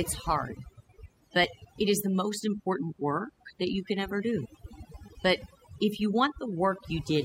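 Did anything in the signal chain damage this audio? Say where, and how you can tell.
Yes. Overdone noise removal runs the whole way through, at the processing stage. The background drops away and breaks up into twinkling specks, because the suppressor is cutting individual bands close to its noise estimate and taking quiet speech detail with them.

There's also an overlap between stream segments at 5.42 s, heard as a tiny click or skip right before "if you". It's a streaming or playback issue. Two segments' timestamps overlap, so the player trims audio that wasn't actually doubled, and the waveform jumps at that segment boundary.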